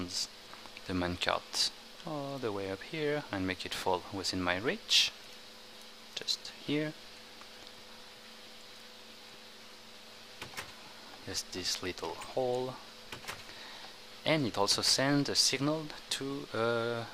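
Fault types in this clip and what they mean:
audio missing between chunks: The recording was likely processed in 6-second chunks, and a short piece was dropped at one handover, with the two sides joined directly and no gap. It is heard as a single skip at 11.71 s, with about 20 ms of sound missing.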